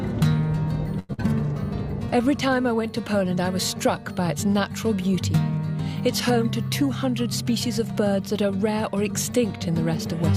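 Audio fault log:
0.99–1.11 s, short stall from a late packet: a packet arrived late and the jitter buffer ran dry, so the receiver held the last sound for about 96 ms while it waited. When the packet came, playback picked up exactly where it had stopped, so nothing is lost. The sound is simply held too long, with a faint buzz, and everything after it now plays about 96 ms later than before.
1.13–1.20 s, burst of packet loss: almost immediately after the stall, a run of audio never arrived in time to be played. The receiver filled about 49 ms by continuing the last sound and letting it fade, which gives a brief held buzz or dying hiss. It then jumped ahead, so about 80 ms of audio is missing. Skipping more than it filled cut the added delay by about 31 ms.
6.82–8.24 s, jitter buffer speed-up: the buffer was holding more audio than its target, so the receiver trimmed it by repeatedly cutting out short slices a pitch period or so long. 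Across this stretch, about a tenth of a second in total is removed. The sound plays at 106% speed with its pitch unchanged, so the passage comes across as slightly rushed rather than higher.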